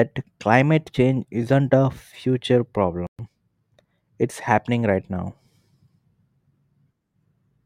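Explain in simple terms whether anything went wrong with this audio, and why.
Yes, two things. At 3.07 s there's a playback stall: the speech cuts out for 120 ms, likely because the player briefly ran out of data. Then from 3.19 to 3.31 s comes time-compressed catch-up, where the player rushes through its backlog at double speed, keeping normal pitch.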